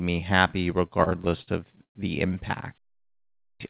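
Between 0.88 and 1.97 s, just after "me happy" and running up to "the impact", the audio shows repeated stalls (stutter). Packets reached the receiver late or too slowly, so its jitter buffer emptied eleven times. Each time, it held the last sound going, stretching it by up to 116 ms and about 291 ms in total, so roughly a quarter of that stretch is filler and nothing is actually lost. On a spectrogram, the filled gaps appear as smeared, repeated slices. On the waveform, the syllables are pulled apart and the sound drags.

At 3.41 s, after about 0.71 s of quiet that follows "the impact", there is a clipped start after a pause. The playback device dropped into sleep during the silence and needed time to wake, so it swallowed roughly the first 0.19 s of the returning sound. That sound begins abruptly, without its opening. The waveform jumps straight in with no onset, and the spectrogram lacks the energy of the first sounds. 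Throughout, the call codec, which fits G.711 A-law, leaves nothing above 4 kHz.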